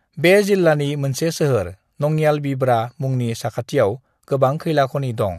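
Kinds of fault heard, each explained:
No fault audible anywhere in the recording; nothing to list.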